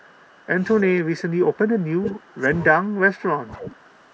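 From 0 to 0.46 s, a very faint delayed copy of the speech trails about 0.31 s behind. This is an echo leak, likely from a loudspeaker echo canceller letting residual pickup through. Between 0.83 and 2.51 s, the speech dips and thins in pieces by as much as about 20 dB, for roughly one and a half seconds in total. This is speech suppressed in double talk, likely caused by the canceller turning down the talker while the far side was also speaking. Inside that stretch, at 2.05 to 2.1 s, a much louder echo leak bursts through, only about 10 dB below the speech and again about 0.31 s late. From 2.74 to 3.66 s the same double-talk suppression returns, with choppy drops of up to about 20 dB over roughly 0.7 s. From 3.58 s to the end, a moderate echo leak sits about 20 dB under the speech at about a 0.31 s delay.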